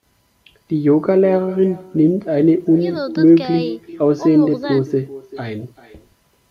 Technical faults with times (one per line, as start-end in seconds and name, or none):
0.00-6.50 echo with no canceller